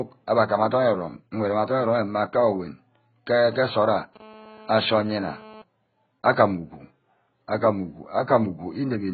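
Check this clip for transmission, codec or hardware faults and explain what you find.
One codec fault runs through the whole speech clip. AAC compression is the likely cause: a dull, smeared sound with fizzy, warbling sibilants, consistent with AAC-LC at a very low bitrate of around 12 kbps. The encoder discards everything above 4.6 kHz and coarsely quantises the remaining frequency lines against a hearing model. A spectrogram shows a hard ceiling at 4.6 kHz and patchy, blocky gaps in the band below it.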